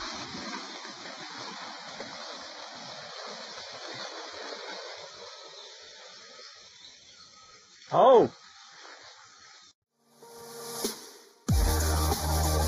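From start to finish there's channel delay (comb filtering): one side runs a fraction of a millisecond behind the other, so the mono sum cancels at evenly spaced frequencies starting around 3 kHz. That leaves the sound hollow and phasey, with fixed notches.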